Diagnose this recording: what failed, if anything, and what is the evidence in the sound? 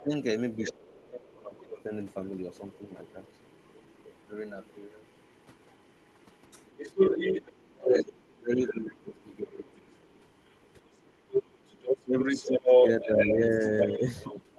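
The talker's speech dips and thins at 0.0 to 0.1 s, 0.7 to 1.76 s, 7.5 to 9.85 s and 12.04 to 14.43 s. The deepest drop, about 35 dB, comes around 7.5 to 9.85 s. This is speech suppressed in double talk at the call-processing stage, likely from the echo canceller attenuating everything while both sides spoke.

A second, fainter voice (the other side's voice leaking through) sits under the speech from 0.62 to 1.07 s at about 10 dB below it, then returns from 1.72 s to the end at only about 5 dB down. The likely cause is the echo canceller failing to remove the loudspeaker signal from the microphone.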